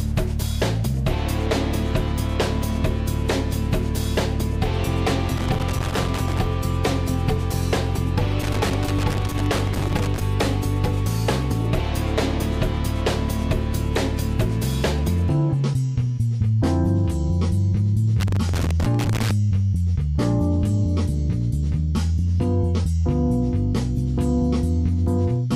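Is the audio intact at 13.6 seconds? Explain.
Yes, the audio at 13.6 seconds is intact, with no dropout, click, distortion or other fault at that moment.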